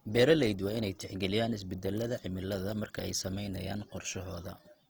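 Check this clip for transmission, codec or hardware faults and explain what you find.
One fault runs through the whole speech clip: Opus compression, clearly audible. The band energy holds but fine detail is lost, so the speech sounds grainy and rough rather than swirly. That fits the likely cause, an encoder in its CELT music mode at about 24 kbps, filling starved bands with folded or noise content, while the bandwidth stays full out to about 20.2 kHz.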